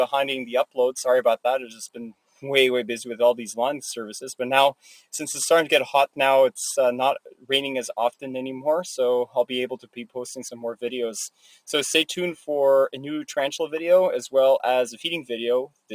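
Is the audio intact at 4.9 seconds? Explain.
No. From 4.77 to 5.13 s, a sound cut by the noise suppressor occurs. The suppressor treats this stretch as noise and turns it down by about 17 dB at its deepest, for roughly 0.3 s in total. The sound dips abruptly and thins, and the waveform shows a sudden hollowed-out envelope.

Around that moment, and through the whole clip, a noise suppressor applied to music or sounds keeps swinging the level by around 5 dB. Held material and tails sink while attacks pass, giving a pumping, fluttering quality. On a spectrogram, sustained bands look patchy and tails are clipped short.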